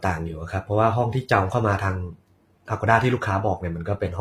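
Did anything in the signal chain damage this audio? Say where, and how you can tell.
Yes, at the codec stage, throughout the speech. The treble sounds rebuilt, with gritty, lispy s sounds. That points to likely HE-AAC compression, fitting a low bitrate near 24 kbps.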